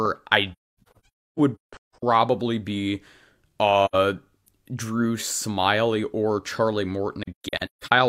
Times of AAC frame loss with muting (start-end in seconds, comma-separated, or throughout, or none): 0.52-2.03, 3.85-3.95, 7.23-7.92